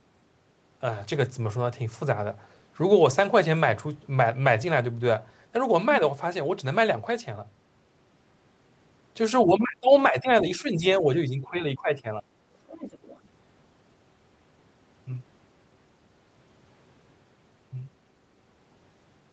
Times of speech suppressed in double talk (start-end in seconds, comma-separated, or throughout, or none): 9.46-10.30, 10.58-12.24